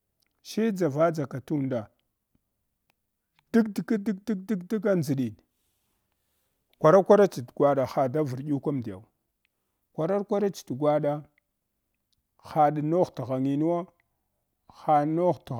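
Listening through this speech recording, nothing stood out as a technical problem.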